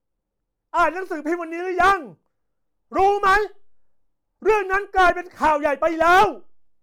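No technical faults can be heard in this speech recording.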